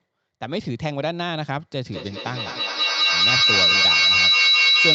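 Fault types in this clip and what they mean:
feedback howl: a microphone-to-loudspeaker loop gaining level each pass, building from 1.85 s into a tone near 4 kHz, about 9 dB above speech, with repeats roughly every 200 ms.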